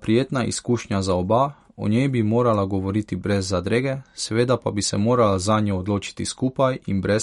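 MP3 compression runs through the whole speech clip, with nothing present above 11.2 kHz. The treble is sliced off at that fixed point, and the remaining sound has a plainly audible watery, swirling quality, with s sounds turning metallic and chirpy. The likely cause is an encoder short of bits, dropping the top band and switching weak frequency lines on and off between frames, a pattern that points to a bitrate around 54 kbps.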